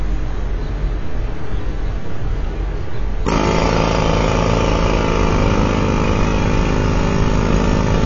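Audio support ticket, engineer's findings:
AAC compression, throughout, 0 to 8 s. Symptom: dull, band-limited sound with nothing above 7.5 kHz and heavy codec damage. Probable component: likely the encode stage, an AAC-LC encoder at a very low rate, consistent with about 16 kbps. Mechanism: too few bits per frame, so the encoder drops the top band and quantises the remaining spectrum coarsely, giving smeared, hollow texture.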